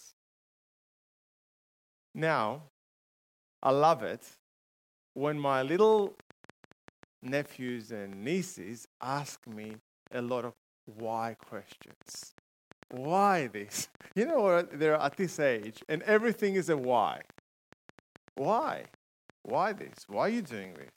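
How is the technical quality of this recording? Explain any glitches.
The recording is marred by a train of clicks from 5.74 s to 20.89 s. Interference from nearby equipment or a faulty connection or power supply likely injects short pulses, about 6.2 per second at an uneven pace, roughly a hundred in all. Each peaks around the level of the sound itself, and the ticking and popping is heard over the sound, pauses included.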